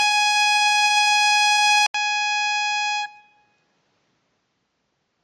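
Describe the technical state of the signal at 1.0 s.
At 1.0 s the music, like the whole clip, has nothing above 12.1 kHz and sounds dull and smeared. Unlike a clean low-pass, coarse quantisation leaves plainly audible smearing, likely from AAC compression at a rate fitting 32 kbps.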